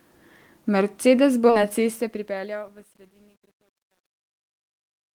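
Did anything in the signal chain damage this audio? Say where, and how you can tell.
Yes. At 1.49 s the speech jumps forward with no gap, and roughly 0.7 s of audio is simply gone, the two sides butted together. This is a skip ahead at the network and jitter buffer stage: a block of late-arriving audio was discarded while newer packets were already queued, so playback leapt forward and the delay dropped by about the same 0.7 s instead of being bridged with fill.

From 1.73 s to the end, the fade-out turns grainy as the level falls, and from about 2.56 s onward the grit is at its worst. That is truncation distortion on a fade, introduced in sample-format conversion or the gain stage: the fade was computed into roughly 10 bits with no dither, so as the level approaches the smallest step the waveform collapses into a few coarse square steps.

Between 2.07 s and 2.64 s the speech runs about 9% fast without any change in pitch, giving it a hurried quality. 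This is jitter buffer speed-up in the buffer stage: after a backlog built up, the receiver trimmed short pitch-period-length slices repeatedly, around 50 ms in total, to pull latency back toward target. Because whole periods are cut, tempo rises while pitch stays put.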